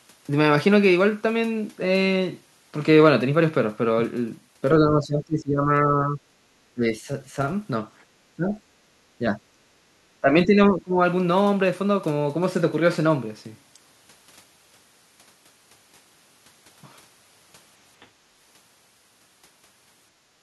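From 4.79 to 6.2 s the talker's level sinks by around 15 dB, then drops out in short bites at 6.74 to 6.85 s and 8.36 to 8.58 s (around 20 dB), dips only slightly at 9.19 to 9.38 s, and falls again by around 15 dB from 10.21 to 11.0 s. This pattern is speech suppressed in double talk, most likely an echo canceller that treats the near talker as loudspeaker echo while both ends speak and pulls the microphone down.

At 20.38 to 20.42 s, right at the end, the room sound briefly ducks by about 7 dB for roughly 40 ms. This is background gated by the echo canceller. Loudspeaker activity triggers the canceller to clamp the microphone, so the ambient bed drops for a moment before the clip ends.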